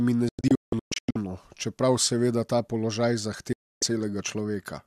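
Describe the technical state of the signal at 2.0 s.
At 2.0 s the speech signal is intact, with no audible technical fault at that moment.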